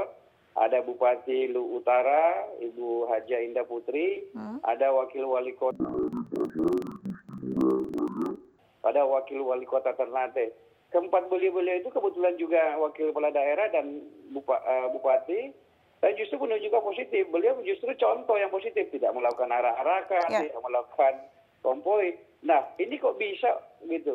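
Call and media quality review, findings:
Interleaved audio read as planar, 5.71–8.61 s: sound drops an octave, doubled and choppy, with a roughness repeating at 21.5 Hz, which fits a 2048-sample block (46.4 ms). Likely in the capture or decode stage's channel de-interleave step. Each block's first half plays as left and second half as right, both at half speed, so the pace holds. Unlike a sample-rate mismatch, tempo doesn't slow.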